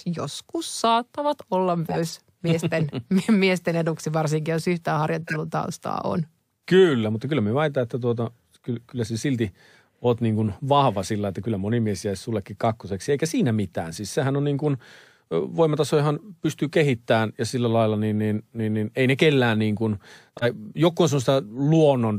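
At 1.89 to 2.12 s, then 5.27 to 5.36 s and 20.37 to 20.44 s, a corrupt frame is decoded. Flipped bits scatter energy to wrong frequencies. The first spans a few frames. The others hit one each. Each sounds like a chirp, squeak, blip or burst of noise.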